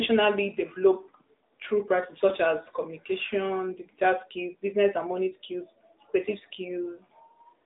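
From start to finish the speech carries AMR narrowband mobile codec damage: content stops near 3.8 kHz, lows thin below 250 Hz, and the mid-rate encoding, fitting about 10.2 kbps, sounds audibly buzzy and synthetic.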